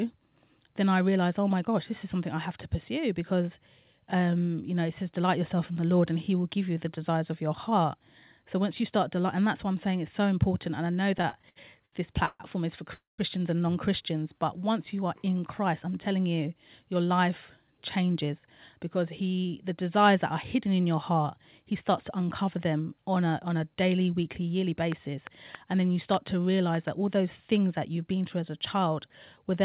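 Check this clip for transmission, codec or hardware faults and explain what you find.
The speech shows five distinct faults, all between 11 and 27 s. It runs through a narrowband call path with nothing above 4 kHz, which fits a 64 kbps G.711 A-law link.

Repeated stalls (stutter), 11.12 to 12.43 s: the jitter buffer ran dry eight times in this stretch as packets arrived late. Each time the receiver stretched the last sound to bridge the wait, filling 343 ms in total, with the longest gap 140 ms. About a quarter of the span is concealment, so the speech drags and stutters, though nothing is lost.

Call audio freeze, 12.94 to 13.21 s: the sound halts for 248 ms. The last fragment is held briefly as a decaying buzz or hiss, then 160 ms of silence follows before speech resumes where it stopped. This is most likely packets held up in transit emptying the jitter buffer. The result is an inserted gap that adds 248 ms of delay without dropping any audio.

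Jitter buffer slow-down, 14.34 to 15.07 s: with its reserve running low, the receiver rebuilt it by repeating single pitch periods and slivers of pause. This added 75 ms and ran the speech at 91% speed. Pitch is unchanged, but syllables sound drawn out.

Jitter buffer speed-up, 16.96 to 19.74 s: here the buffer held more audio than its target, so the receiver trimmed short pieces of one or a few pitch periods in quick succession. Roughly a fifth of a second was removed, and playback runs at 107% speed. Pitch stays the same, but the speech sounds noticeably hurried across this whole stretch.

Train of clicks, 24.92 to 26.89 s: about seven clicks of similar shape arrive at an uneven pace, averaging about 2.6 per second. They peak roughly 10 dB above the speech and are heard as distinct pops over it and in the pauses. The likely source is electrical interference or a faulty connection or power supply injecting pulses into the signal.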